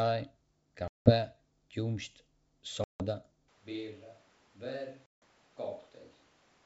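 At 0.88 s, 2.84 s and 5.06 s, packet loss on an ADPCM call cuts hard-edged silent gaps of about 180, 160 and 160 ms. Each gap is a flat-line hole in the waveform and a blank vertical stripe on the spectrogram. When the sound resumes, brief slight distortion follows as the decoder's predictor and step size resynchronise with the sender.

From 3.48 s to the end, the audio suddenly turns roomy, hollow and thin in the bass. This is likely a switch to a distant microphone. The level drops by about 10 dB, room noise rises to about 25 dB below the speech, and the spectrogram shows a step change with a raised noise floor and weaker low frequencies. Throughout, the G.722 wideband coding still reaches about 7 kHz with only faint upper-band hiss.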